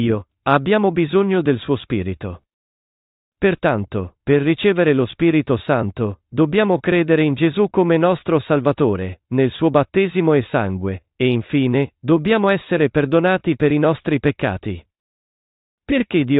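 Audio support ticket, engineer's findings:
Listened through the full recording and nothing stood out; no findings to log.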